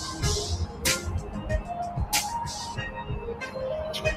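A noise suppressor applied to music or sounds runs from start to finish. A speech-oriented suppressor is treating steady, sustained content and ambience as background noise and pulling it down, with its gain swinging by roughly 10 dB as it decides what to keep. Onsets pass fairly intact, but held material and decaying tails sink, so the audio pumps and flutters in level and sounds thinner than it should.

Sound cut by the noise suppressor, from 0.66 to 0.83 s. Here the suppressor judged a passage to be noise and turned it down harder than its surroundings, with a deepest drop of about 6 dB. The dip lasts a fraction of a second, so the level briefly sags before the signal recovers.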